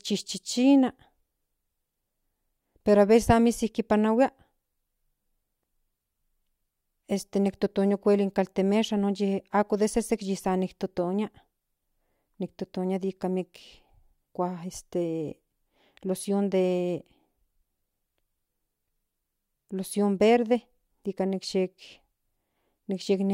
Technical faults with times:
none

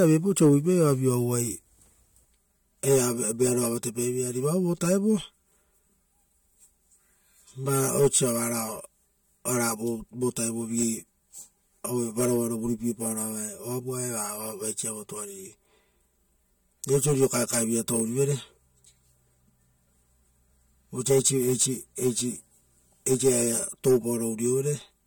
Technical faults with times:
2.25-25.07 channel delay (comb filtering)

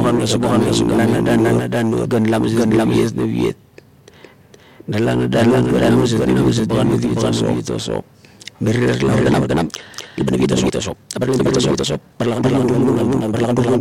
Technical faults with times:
0.00-13.81 doubled audio track
9.13-13.81 time-stretched section

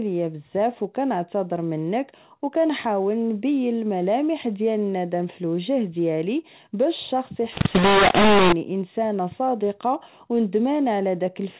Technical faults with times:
7.52-8.52 mu-law and A-law mixed up

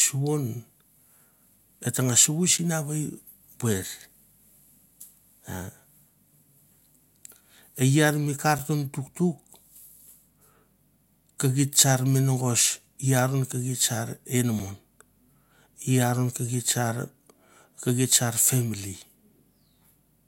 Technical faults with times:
2.58 gap between chunks
8.58 gap between chunks
14.59 gap between chunks

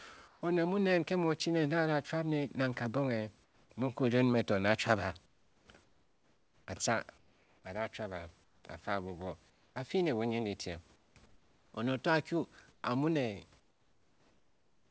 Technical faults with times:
0.28-0.42 comfort noise in place of the background
3.44-3.70 comfort noise in place of the background
5.26-7.64 comfort noise in place of the background
8.44-8.64 comfort noise in place of the background
9.50-9.76 comfort noise in place of the background
10.96-11.74 comfort noise in place of the background
12.72-12.84 comfort noise in place of the background
13.60-14.90 comfort noise in place of the background

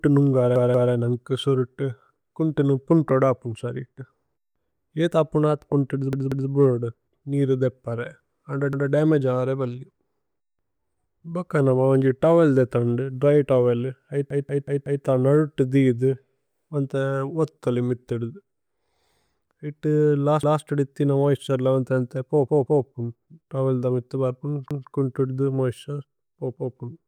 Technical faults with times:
0.56-0.93 repeated buffer
6.13-6.50 repeated buffer
8.73-8.92 repeated buffer
14.30-15.05 repeated buffer
20.43-20.62 repeated buffer
22.48-22.85 repeated buffer
24.71-24.89 repeated buffer
26.56-26.75 repeated buffer

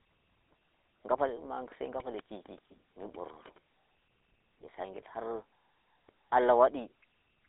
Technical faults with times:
0.00-7.48 GSM full-rate codec

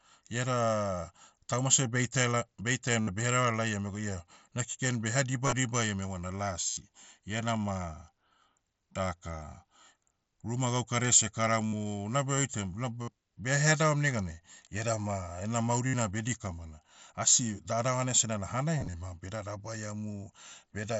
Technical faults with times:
3.00-3.07 concealed Bluetooth headset packet loss
5.46-5.53 concealed Bluetooth headset packet loss
6.69-6.77 concealed Bluetooth headset packet loss
11.67-11.73 concealed Bluetooth headset packet loss
13.02-13.08 concealed Bluetooth headset packet loss
15.87-15.94 concealed Bluetooth headset packet loss
18.79-18.93 concealed Bluetooth headset packet loss

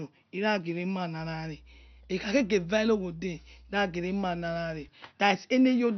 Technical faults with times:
0.00-5.97 MP2 compression

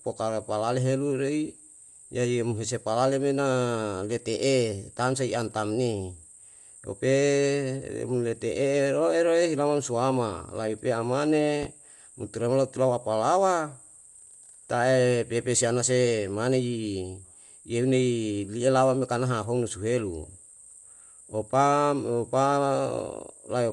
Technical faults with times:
0.00-23.72 Bluetooth LC3 compression
11.63-11.66 loud pop

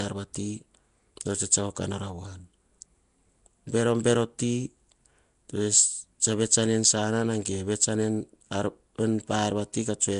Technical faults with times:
0.00-10.20 Nellymoser compression

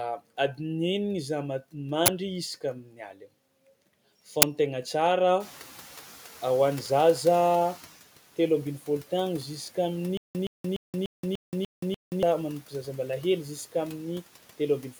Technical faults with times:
2.83-3.26 speech cut by the noise suppressor
4.42 uninitialised buffer
5.40-7.93 noise suppressor catching up
10.17-12.23 stutter with silent gaps

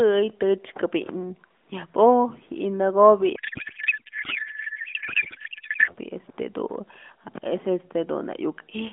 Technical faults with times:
3.36-5.94 codec payload misread

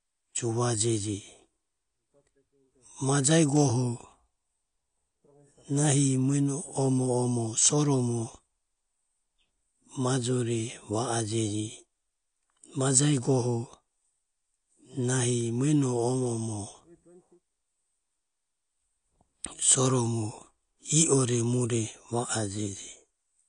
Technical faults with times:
0.00-23.49 AAC compression

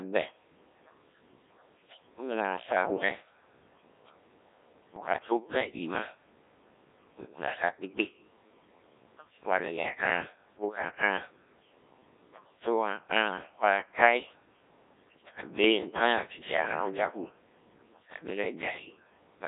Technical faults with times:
0.00-19.48 Codec 2 vocoder
2.84-3.08 bit errors on digital voice radio
4.96-5.14 bit errors on digital voice radio

